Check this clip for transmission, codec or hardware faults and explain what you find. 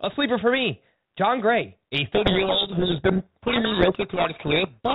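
One fault: from 2.15 s to the end of the clip, a codec payload misread. The two ends disagree on the bit order inside each G.726 code word, so the decoder turns every reversed word into the wrong step size and direction, and its adaptive prediction drifts off course. The speech, narrowband and only lightly coloured by coding that fits 32 kbit/s before this point, becomes buried in harsh, grinding distortion that persists to the end.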